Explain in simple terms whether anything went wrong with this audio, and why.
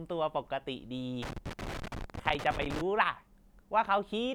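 Yes, something went wrong: from about 1.23 s to 2.81 s the speech is broken up by an irregular burst of crackling and scratching, roughly one and a half seconds long. This is loose connector crackle. A worn or dirty contact somewhere in the cable or plug was moving, so the connection kept making and breaking very quickly. Each break chops the signal for an instant, and any small DC voltage on the line turns those breaks into sharp pops.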